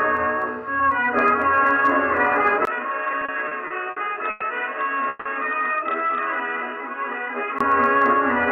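From 2.65 s to 7.6 s the audio turns narrower and duller. It drops by about 5 dB and carries a new background noise roughly 40 dB below the signal, with a break of about 20 ms at 2.65 s where the change happens. The likely cause is the input switched to a poorer device, such as another microphone or a headset's call profile, whose reduced bandwidth and own noise replace the original path. On a spectrogram the upper frequencies thin out across that span, a steady noise floor fills the gaps between sounds, and a thin vertical gap marks the switch. The waveform is visibly lower from that point. Inside this stretch, between 3.11 s and 4.43 s, there are repeated stalls (stutter): seven gaps totalling 280 ms, the longest 110 ms, make up about 21 percent of that span. Packets arrived late or too slowly, so the jitter buffer kept running dry and the receiver stretched the last sound each time before carrying on. 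Nothing is lost, but the flow drags and hiccups. The waveform shows seven short, repeated-looking stretches, and the spectrogram shows brief blurred horizontal streaks in place of normal detail. At 5.09 to 5.27 s the sound holds as a continued buzz or hiss for 160 ms with no silent part, then resumes where it stopped, so everything after it is pushed 160 ms later. This call audio freeze most likely comes from packets being held up in transit until the buffer emptied. It appears as a smeared, flat band on the spectrogram and a smooth, repetitive section in the waveform.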